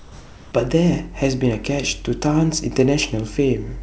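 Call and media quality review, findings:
Comfort noise in place of the background, 0 to 0.52 s: a steady, featureless hiss within about 1 dB of the real background, rather than gated silence. The likely cause is sender DTX, with the receiver synthesising the pause.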